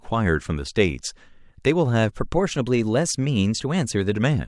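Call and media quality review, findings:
Drift correction step, 2.18 to 4.15 s: clock-matching resampler likely changed playback rate in a single jump to rebalance its buffer. Speech runs 6.38% fast with pitch raised 107 cents, about a semitone, then snaps back at 4.15 s.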